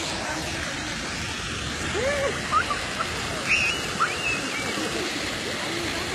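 From start to finish the sounds carry low-bitrate smearing under a high-bitrate MP3 wrapper: low-bitrate audio saved at a high bitrate, likely a 20 kbit/s HE-AAC pass re-encoded.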